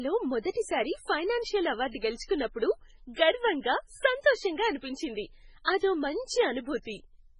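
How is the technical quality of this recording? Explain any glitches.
The recording has heavy coding damage throughout the speech and one audible pre-echo.

MP3 compression, throughout: nothing is present above 10.5 kHz, and weak frequency components flicker on and off between frames, giving a watery, swirly texture with metallic edges on s sounds. The cause is likely a low-bitrate MP3 encode, and damage this heavy fits a rate around 16 kbps.

Pre-echo, 2.24 to 2.29 s: a short hiss runs for about 52 ms before a sharp attack, which sounds softened. The attack fell late in a transform block, so quantisation noise sized for the loud onset spilled into the quiet moment before it.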